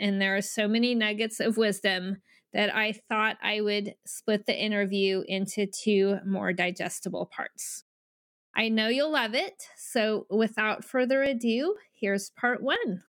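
Periodic USB or driver dropouts run from 10.76 to 12.76 s in this speech recording, just after "you'll love it so": about five tiny ticks spaced 0.50 s apart, where something stalls the USB bus or audio driver on a fixed schedule and roughly half a millisecond of audio is skipped each time.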